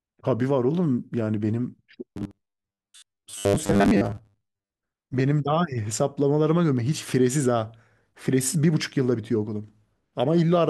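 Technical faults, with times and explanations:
2.14–4.70 s, robotic sound from repeated short buffers: audio likely arrived too seldom, so most of it was replaced by loops of 10 ms segments, forcing a rigid metallic 100 Hz buzz.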